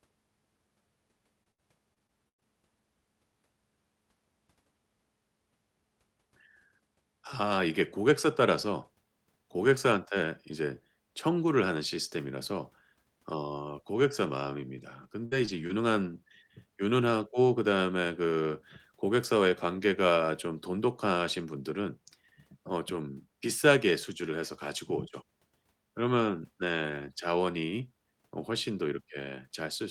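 Repeated packet loss (robotic sound) at 1.43–2.43 s and 14.77–15.71 s: missing chunks were patched by extending preceding audio, producing choppy speech with fragments dropped.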